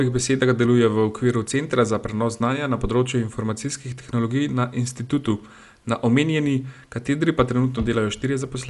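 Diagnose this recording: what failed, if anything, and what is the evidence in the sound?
The damage is at the codec stage, and it runs the whole length of the speech. Nothing comes through above about 11.4 kHz, so everything sounds dull, and there's a rough, fluttering grain clinging to the voiced sounds. That's most likely Dolby Digital compression at a starved rate, something like 64 kbps. The encoder trims the top of the band and leaves many frequency lines without real detail, so the decoder patches them with noise.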